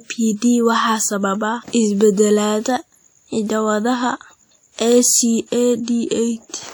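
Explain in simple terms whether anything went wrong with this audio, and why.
Throughout the recording, the speech has a ringing, washy edge and a hiss that swells and fades with the voice. The likely cause is WMA compression: the encoder smears its rounding noise across tens of milliseconds of sound and discards quiet detail.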